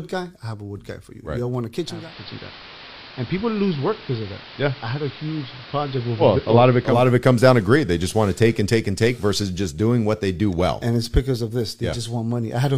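From 1.75 s to 7.12 s the speech turns dull and hissy, with a steady hiss about 20 dB below it, at an unchanged level. This is digital radio blending to analogue: the receiver cross-faded over 0.42 s to the AM broadcast, then back.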